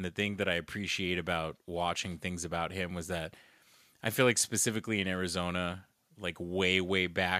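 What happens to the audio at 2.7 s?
Automatic gain rising runs from 0.44 s to 3.42 s, starting just after "the thing", so 2.7 s falls inside it. The gain control judged the input too quiet and raised its level gradually, by about 4 dB, so voice and background swell together.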